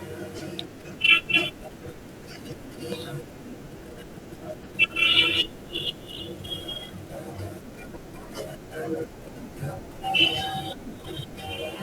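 Corrupt frames decoded at 0.38–0.42 s, 4.63–4.66 s, 6.17–6.20 s and 8.22 s. Damaged compressed frames play anyway, giving brief chirpy noise bursts, the last one faintest.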